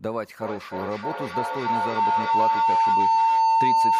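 Speech with a feedback howl from 0.41 s to the end, peaking about 9 dB above the voice near 1 kHz and pulsing about every 300 ms. Unlike echo, its repeats grow rather than fade, from a microphone-loudspeaker loop.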